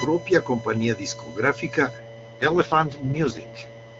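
A speech recording with a buzzing, chirping whine under it from start to finish, pulsing at around 1 kHz and sitting roughly 20 dB below the speech. It follows no rhythm of the talking. This is computer activity noise: load changes in the processor, graphics card or mouse push current through the ground shared with the audio circuit, and those ground shifts leak into the signal as a buzz that jumps up and drops back with the computer's activity. From 1.98 s to the end, the speech turns rough, raspy and synthetic, with no gap and no loss of bandwidth. Before that point the AMR wideband (HD Voice) coding is clear. This is an AMR rate drop, and the degradation fits a fall from the codec's top 23.85 kbit/s mode to its lowest, 6.6 kbit/s. A weak radio link makes the network order a lower speech rate so that more bits go to error protection, leaving the vocal model too coarse to sound natural.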